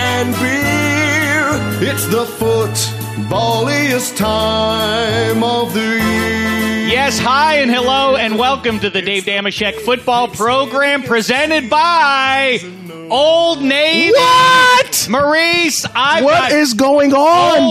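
No technical faults can be heard anywhere in the recording, and the signal holds steady throughout.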